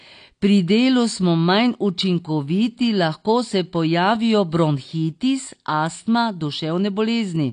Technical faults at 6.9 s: AAC compression

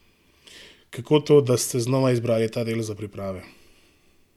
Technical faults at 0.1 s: none

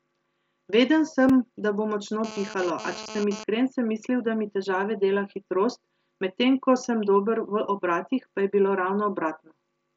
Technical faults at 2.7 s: GSM phone buzz

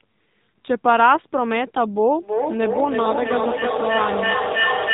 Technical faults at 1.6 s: AMR narrowband mobile codec

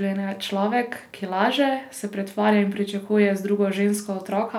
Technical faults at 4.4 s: none

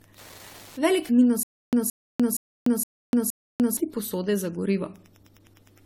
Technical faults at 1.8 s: Wi-Fi interference; generation loss; stutter with silent gaps

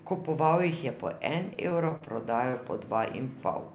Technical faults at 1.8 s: repeated packet loss (robotic sound)

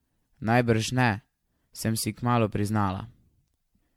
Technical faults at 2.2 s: generation loss

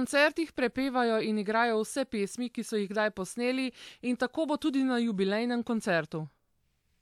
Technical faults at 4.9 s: none

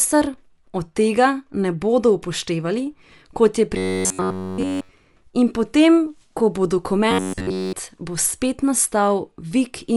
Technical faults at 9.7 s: Dolby Digital compression

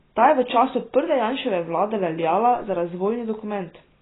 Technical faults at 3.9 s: AAC compression

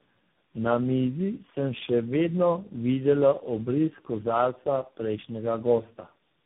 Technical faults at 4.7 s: tandem speech coding

